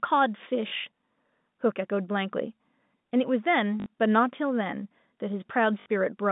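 Packet loss with last packet repeated occurs at 0.68 s (40 ms), 3.80 s and 5.80 s (60 ms each). The receiver replays the last packet until new ones arrive. Each gap is a buzzy robotic stutter whose steps fit 20 ms packets, heard through narrowband G.711 telephone coding.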